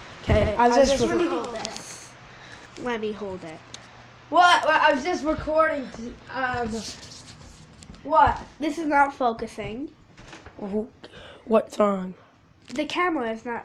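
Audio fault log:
0.00–2.66 s, doubled audio track: a second full-band copy trails about a tenth of a second behind, several dB down, likely from a parallel capture path, then cuts off abruptly.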